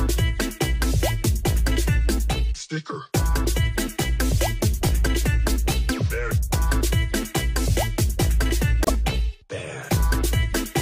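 At 8.84 s the stream suffers repeated frames: one compressed block of 26.1 ms was written or delivered twice, so the decoder plays the same slice of audio a second time before moving on, which fits a single duplicated frame. Through 8.90 s this is heard as a brief stutter, the sound catching and jumping back for an instant, and everything after it arrives 26.1 ms later than it should.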